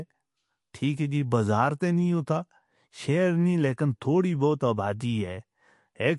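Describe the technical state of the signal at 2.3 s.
At 2.3 s the speech carries plainly audible damage that runs through the whole clip, likely from MP3 compression. Nothing sounds above 11.3 kHz, and weak frequency detail flickers in and out between frames, giving a watery, swirling texture with chirpy s sounds and softened attacks, which fits a low bitrate of about 48 kbps. A simple low-pass filter would dull the treble just as evenly, but it would not cause that shifting, metallic swirl.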